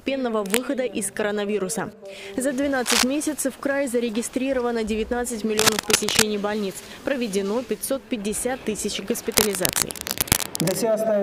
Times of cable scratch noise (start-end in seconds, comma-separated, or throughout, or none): 0.39-0.58, 2.86-3.03, 5.58-6.23, 9.32-10.75